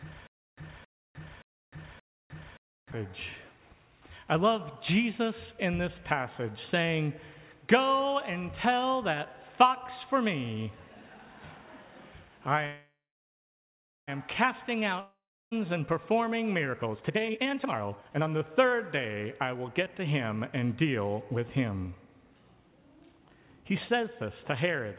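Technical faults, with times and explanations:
0.00–2.92 s, stutter with silent gaps: the clip opens with this already under way. A burst of about 0.27 s plays, then about 0.31 s of digital silence, and the same burst returns every 0.58 s, four times in all. This is likely a stalled player or stream that replays its last buffered fragment at each retry and then runs dry. Whatever audio belonged in this span is gone, and only the repeated fragment and the gaps remain.
12.66–14.09 s, call audio freeze: the sound stops moving forward and the last moment is stretched into a buzzy, fading fill for about 1.41 s, of which about 1.12 s is silent. The likely cause is delayed packets emptying the jitter buffer, with the receiver concealing the shortfall. When the packets arrive, playback resumes exactly where it paused. Nothing is lost, but the audio now runs about 1.41 s later than before.
15.00–15.53 s, long network dropout: about 0.51 s of concealment, a brief fading continuation of the last sound followed by about 0.35 s of silence. 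Unlike the freeze, the audio comes back further along, and about 0.52 s of material is never heard. This is likely a stretch where no packets reached the receiver at all. The receiver filled the hole with decaying synthesized sound rather than waiting for data that never came.
16.71–19.63 s, jitter buffer speed-up: the audio runs at about 149% of normal speed while the pitch stays put, so it sounds hurried and rhythmically compressed. The receiver is draining a backlog, as happens after delayed packets arrive together. It repeatedly cuts out short pitch-period-sized pieces, roughly one and a half seconds in total. Throughout the clip there is nothing above 4 kHz, which fits G.711 mu-law at 64 kbps on the call path.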